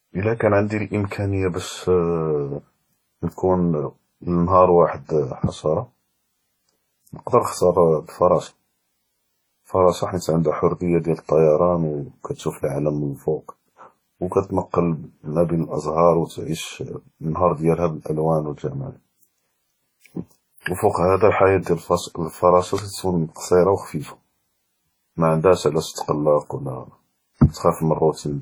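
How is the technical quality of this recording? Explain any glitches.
The speech carries heavy codec damage throughout, with two brief snaps and one smeared attack.

WMA compression, throughout, is the likely cause of the washy, ringing quality. This transform codec spreads quantisation noise over long blocks and drops weak spectral detail, so a hiss rises and falls with the speech, consistent with a low bitrate near 32 kbps.

Electrical switching spike: a sharp snap at 17.86 s, between "ו תעיש נהאר דיאלהא" and "באלאלואן ו", and another at 22.78 s. Each is likely a nearby switch or discharge arcing briefly and coupling a click onto the audio line, heard on top of the speech.

Pre-echo, from 20.60 to 20.66 s, spreads over about 57 ms. A sharp attack fell late in a codec block, so noise sized for the loud onset also filled the quiet moment before it, giving a short hiss ahead of a softened attack.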